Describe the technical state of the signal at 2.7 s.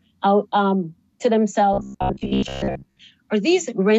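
At 2.7 s the signal is inside a stretch of robotic sound from repeated short buffers running from 1.73 to 3.01 s. The audio turns into a rigid, metallic buzz at about 66.7 Hz, which matches a fragment roughly 15 ms long being looped. The likely cause is fresh audio arriving too seldom, so playback keeps re-sending the last short buffer and skips the real material for most of that span.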